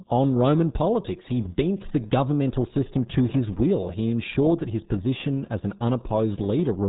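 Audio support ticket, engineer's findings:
RealAudio 14.4 codec damage, whole clip. Speech muffled and gargly, heavy codec smear, nothing above 3.8 kHz. Sounds like RealAudio 1, which fits an 8 kbit/s dial-up-era stream. Coder models speech coarsely, drops the top end entirely, so sibilants go and vowels bubble. Re-encode from the original source, not this copy.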